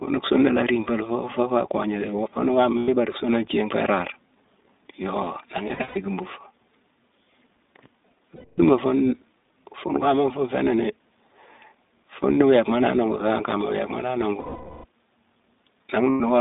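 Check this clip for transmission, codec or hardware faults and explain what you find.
Two faults are present: continuous iLBC codec coding and five bursts of lost iLBC frames.

The iLBC codec is audible throughout the speech. The band is held to roughly 250 Hz to 3.7 kHz. Each 20 ms frame's excitation is coded independently, leaving a plainly rough, slightly synthetic texture. That fits the 15.2 kbps, 20 ms mode.

Lost iLBC frames occur at 2.78 to 2.90 s, 5.68 to 5.98 s, 8.36 to 8.60 s, 14.40 to 14.85 s, and 16.10 to 16.21 s. In each gap the decoder repeats the last pitch cycle mixed with noise. This gives a held, buzzy vowel that fades over the longest, 440 ms gap. The 5.68 s loss is broken up, with its longest run about 150 ms. Speech recovers immediately after each gap.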